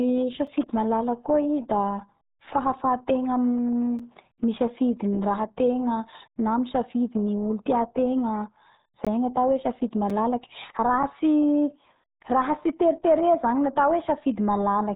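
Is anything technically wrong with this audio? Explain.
Yes. Two faults are audible.

Throughout, the speech carries the heavy damage of the RealAudio 14.4 codec, an 8 kbit/s dial-up speech coder. Nothing passes above about 3.8 kHz, so the voice sounds muffled and gargly. A spectrogram shows a hard ceiling near 3.8 kHz, with smeared, blotchy energy below it.

Four blocks of digital silence occur, at 0.47, 3.99, 9.05 and 10.10 s. The output abruptly drops to zero and returns with no fade. Three are about 5.3 ms long, heard as a tick or dip, which fits a 256-sample buffer left unfilled. The one at 9.05 s is nearly 18 ms, long enough to be heard as a short hole. The waveform shows flat, near-silent segments, and the spectrogram shows thin vertical gaps.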